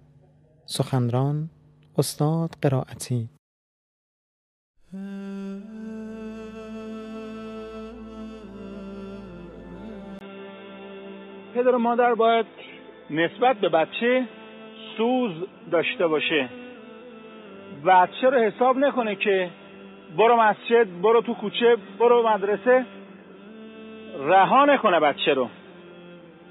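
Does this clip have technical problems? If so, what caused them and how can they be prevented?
Yes. At 10.19 s, after a 20 ms silence, the sound turns dull and boxy to the end, with nothing above 3.8 kHz, a faint new noise floor and no clear level change. The likely cause is the input switched to a poorer device, such as a narrowband headset profile. To prevent this, lock the recording input to one device and turn off automatic device switching.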